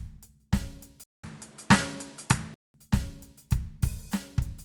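At 1.04 s the music drops out for about 200 ms, then comes back duller, with nothing above 11.4 kHz, a level shift of around 5 dB and new noise sitting roughly 30 dB under the music. That's likely the input switched to a poorer device, a narrower-band mic with its own tone and noise floor. It stays that way until 2.74 s, when the full top end and the original character snap back.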